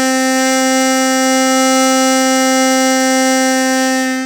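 The music arrives intact, with no dropouts, distortion, timing errors or other technical faults anywhere in the recording.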